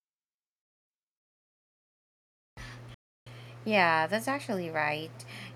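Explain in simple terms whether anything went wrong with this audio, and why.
At about 2.94 seconds the speech just cuts out and stays silent until roughly 3.27, a gap of about a third of a second. That's a playback stall, likely the player running short of data or getting held up before it caught up again.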